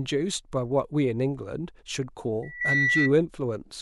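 At 2.43 s a loudspeaker feedback squeal kicks in: a single tone at 2 kHz that swells over roughly half a second and ends up sitting about 5 dB above the speech before it drops away at 3.13 s. A mic is clearly hearing the speaker it feeds, and at that one frequency the loop gain tipped past unity, so the tone just kept feeding itself.

Right in the middle of that, at 2.60 s, there's a case of compressed frames skipped. The audio jumps forward by something like 200 ms, which fits a handful of dropped frames around 26 ms each, probably about seven. Those frames either weren't in the file or the decoder threw them out as damaged.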